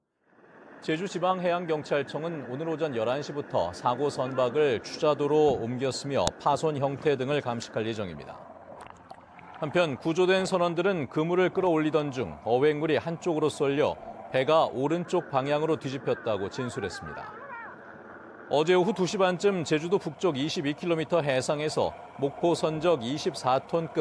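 File header played as audio, at 6.27 s: a brief click or snap cuts into the sound at this point, independent of whatever the signal is doing. It fits a joint where separate WAV pieces were spliced or streamed one after another without stripping each piece's header. The header's few dozen bytes of metadata were then read as if they were sample values, producing a burst of arbitrary amplitudes at the start of the new piece.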